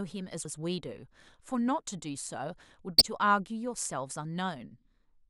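A speech recording with damaged data in a compressed stream, heard as short glitches at 0.42–0.45 s and 2.98–3.01 s, where the decoder misreads corrupted frames and briefly loses sync.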